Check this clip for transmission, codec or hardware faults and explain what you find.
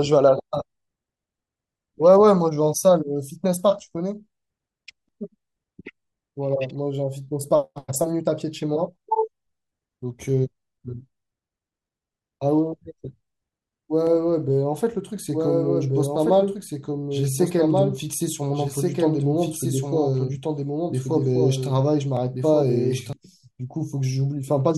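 There's a doubled audio track from 14.07 s to 23.13 s: a second full-band copy of the speech trails the original by about a second and a half, a bit quieter. It's likely a slower second capture path, switching in and out abruptly.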